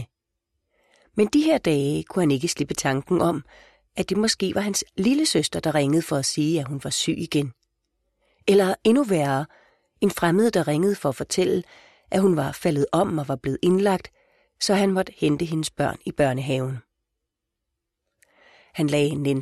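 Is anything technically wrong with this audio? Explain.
No, nothing is technically wrong with this audio.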